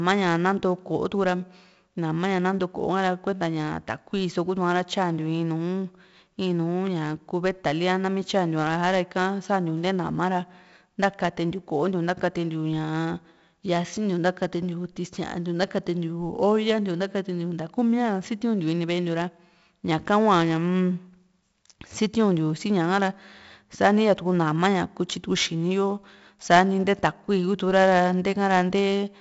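4-bit ADPCM compression runs throughout the speech. Each sample is stored as a small step from a prediction, so the error follows the signal: gritty hiss on every loud syllable, rougher on sharp onsets, and nothing above 7.7 kHz, consistent with a 64 kbps stream.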